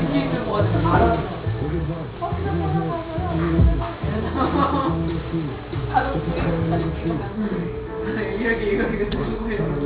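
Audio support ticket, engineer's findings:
Aliasing throughout: gritty, metallic folded tones, spectrum packed hard against 4 kHz. Fits a downsample to 8 kHz without anti-alias filtering; folded content roughly 25 dB below signal.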